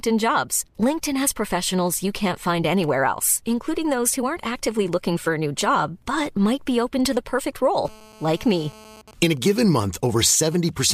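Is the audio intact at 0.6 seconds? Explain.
Yes, at 0.6 seconds the speech plays through cleanly, with no dropout, click, distortion or other fault at that point.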